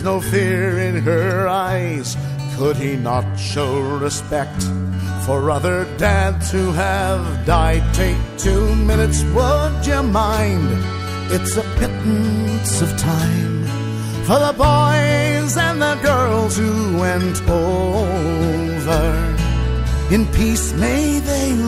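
Scattered short gaps between 4.91 and 5.75 s: about seven brief dropouts, each around 10 ms, bridged by extending preceding audio, heard as ticks and small smears.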